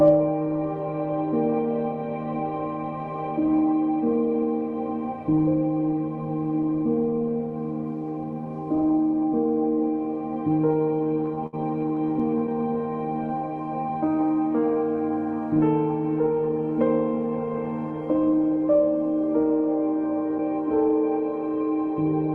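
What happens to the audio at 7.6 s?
Nothing goes wrong at 7.6 s: the audio carries on intact through that moment, with only the steady character of the WebRTC call path it passes through.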